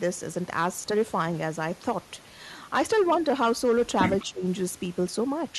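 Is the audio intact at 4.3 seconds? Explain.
No. At 4.3 s the speech is caught by speech suppressed in double talk, which runs from 4.29 to 4.44 s, about 150 ms in all. The level sags, dropping by roughly 20 dB at its deepest. The likely cause is an echo canceller facing simultaneous talk from both ends. Unable to separate the near talker from the loudspeaker return, it attenuates both.

Just before this, from 4.19 to 4.25 s, there is a brief echo leak: a faint delayed copy of the speech arriving about 200 ms late and sitting roughly 25 dB under the direct signal. This is likely a loudspeaker-to-microphone path that the echo canceller did not fully remove, so a residue was sent back down the line.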